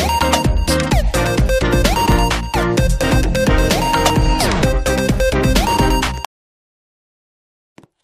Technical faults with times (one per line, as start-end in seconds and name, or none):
1.10 overlap between stream segments
2.12 overlap between stream segments
3.11 overlap between stream segments
4.10 overlap between stream segments
6.07 overlap between stream segments